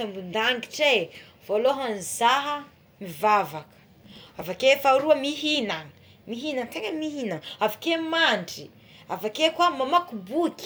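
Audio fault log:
4.04–4.43 s, processor overload crackle: the processor fell behind and skipped a few dozen tiny buffers again and again, so hard-edged gaps pile into gritty tearing.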